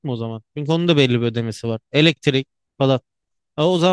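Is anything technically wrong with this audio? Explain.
No, nothing is technically wrong with this audio.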